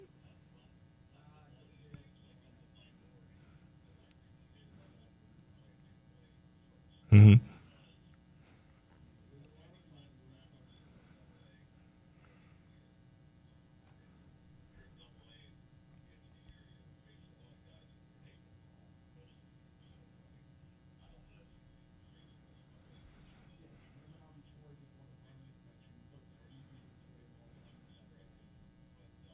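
No technical faults are audible in this audio.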